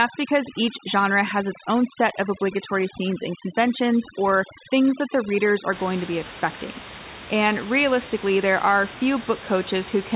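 From the start to about 5.72 s you get overdone noise removal. The noise reducer was pushed too hard, so any frequency band sitting near its idea of the noise gets pulled way down or shut off, and the quieter parts of the speech get dragged out with it. The gaps drop to near silence with little twinkling specks. After that point the room noise, about 12 dB under the speech, comes back through the call path's narrow band, which tops out at 4 kHz.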